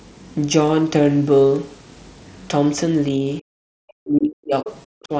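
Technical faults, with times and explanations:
3.41–3.45 s, 3.98–4.67 s and 4.95–5.12 s, speech suppressed in double talk: the voice drops sharply, by roughly 40 dB at its deepest, briefly at first, then for about 0.7 s. The likely cause is an echo canceller treating overlapping far-end speech as echo and attenuating everything. The waveform shows an abrupt near-flat gap, and the spectrogram shows energy vanishing across the whole band up to the 8 kHz ceiling.
4.68–4.72 s, other side's voice leaking through: right after the long dip, a short scrap of a second voice appears, about 15 dB below the talker, likely far-end sound from the loudspeaker that escaped echo cancellation. On the spectrogram it is a faint, short burst of unrelated harmonics, and on the waveform a small blip.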